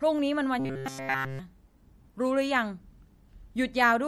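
Throughout the speech, MP3 compression is plainly audible: faint detail flickers in and out between frames, giving a watery, swirling texture with chirpy s sounds. This is likely a low bitrate, around 64 kbps, and unlike dropouts, nothing goes silent.

From 0.60 to 1.39 s, the speech becomes a rigid, metallic buzz at 134 Hz. This is robotic sound from repeated short buffers. Essentially all of that stretch is a tiny slice being looped, which fits a buffer of about 7.5 ms, likely refilled too seldom. Unlike codec swirl, the fixed pitch distinguishes it.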